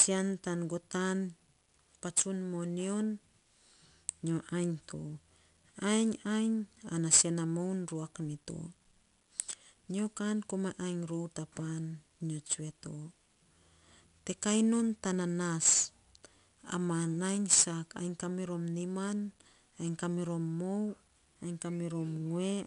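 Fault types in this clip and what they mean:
4-bit ADPCM compression: Each sample is stored as a small 4-bit step from a predicted value, with the step size adapting as the speech moves. The quantising error rides along as broadband noise that rises and falls with the signal. Here the damage is plainly audible throughout, as a gritty hiss clinging to the louder syllables. Nothing reaches above 10.7 kHz, which fits a sample rate near 22 kHz and dulls the top end.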